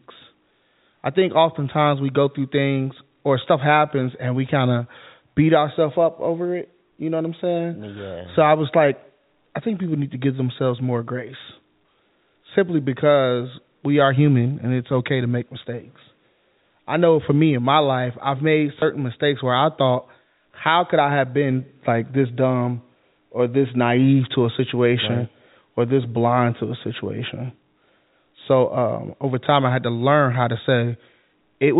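At 18.8 s, between "my life I've made" and "mistakes where I thought", there is packet loss with the last packet repeated. One 20 ms chunk went missing. The receiver replayed the previous one. The single repeat sounds like a small blip through the narrowband G.711 telephone audio.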